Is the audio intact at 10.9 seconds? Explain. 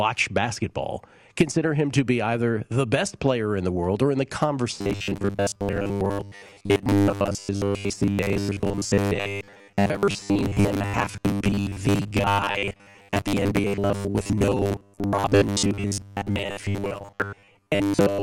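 No. At 10.9 seconds the speech is in the middle of robotic sound from repeated short buffers. This starts at 4.81 s, right after "world or in the", and lasts to the end of the clip. The speech turns into a stiff, metallic buzz pitched at 100 Hz. It still loosely tracks the words. The likely cause is audio arriving too slowly, so the player keeps repeating a 10 ms slice in place of most of the real signal.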